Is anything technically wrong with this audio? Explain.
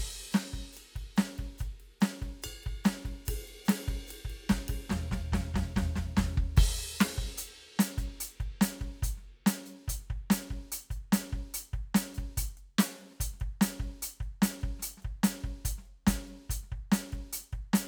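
No, nothing technical stands out here; the music just runs along without any glitches or problems catching the ear.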